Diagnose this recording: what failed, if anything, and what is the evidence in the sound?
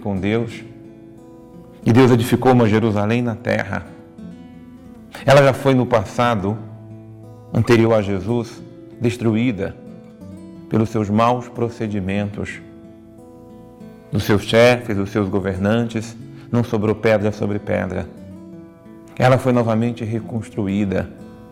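Nothing in the signal chain shows a failure: the audio runs without dropouts, clicks, clipping, level jumps, pitch or timing disturbances, or bandwidth loss.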